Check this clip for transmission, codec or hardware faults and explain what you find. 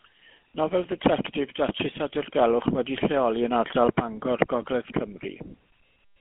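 The speech has passed through the GSM full-rate codec, and the damage is plainly audible for the whole clip. The codec models the vocal tract as a filter and excites it with a sparse, regularly spaced pulse train that keeps only a third of the excitation detail, which fits the 13 kbps full-rate scheme. Nothing survives above 3.8 kHz, and the line band runs roughly 200 Hz to 3.4 kHz. The result is a buzzy, gravelly roughness over a thin, muffled voice.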